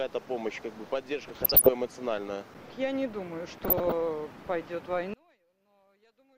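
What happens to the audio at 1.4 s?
DAB burbling runs from 1.23 to 1.69 s, covering the 1.4 s mark. Weak reception lets bit errors slip past the error correction into the MP2 audio data, at a rate of around half a percent. Corrupted samples put short blips of noise in individual sub-bands and corrupted scale factors make sub-bands jump in level for up to a frame, across roughly twenty frames.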